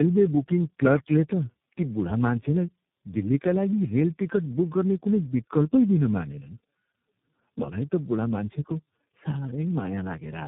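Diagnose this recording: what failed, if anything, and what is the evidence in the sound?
Tandem speech coding is the fault, at the codec stage. It runs through the whole clip. The speech sounds rough, muffled and warbly, worse than a single low-rate coder would leave it. Nothing is heard above 3.8 kHz. The sound points to three speech codecs in a row: AMR-NB, G.723.1 and iLBC, with plain G.711 links between them. Each border decoded the audio and coded it again. Every coder then modelled the previous one's errors, so the damage stacked.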